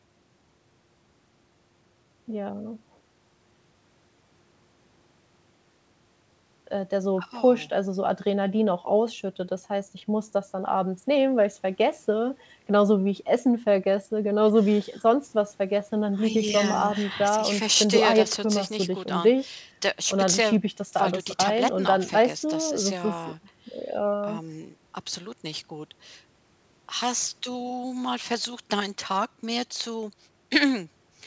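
Speech with no audible technical faults anywhere.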